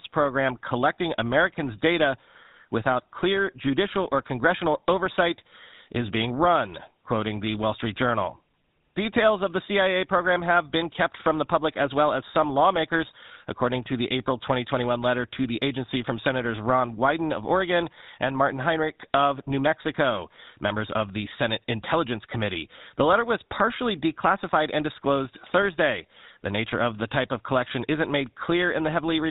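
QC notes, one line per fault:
Throughout, GSM full-rate codec: the speech has been through the original GSM full-rate coder, and the plainly audible damage fits its 13 kbps rate. The coder keeps a model of the vocal-tract shape, then rebuilds the excitation from a regular pulse train that holds only one sample in three. That sparse excitation gives the speech a buzzy, gravelly roughness, and since nothing above 4 kHz survives, the sound is dull and band-limited.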